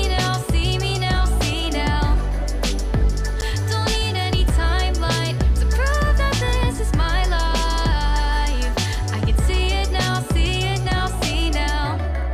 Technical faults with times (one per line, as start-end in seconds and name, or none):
3.41 block of digital silence
4.49 block of digital silence